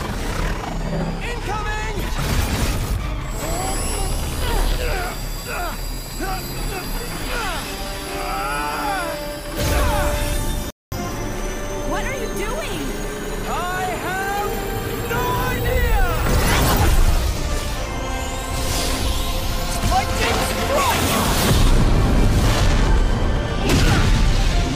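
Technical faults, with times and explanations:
10.70–10.92 s playback stall: the sound stops mid-flow and the output holds dead silence for about 217 ms before carrying on. The likely cause is the player running out of data.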